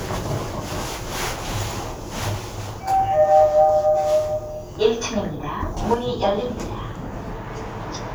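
At 5.94 s the level falls abruptly by about 6 dB and stays low to the end. The likely cause is one channel dropping out, so the mono sum loses half its shared signal. It is a sudden step, unlike a fade, which would slope gradually downward.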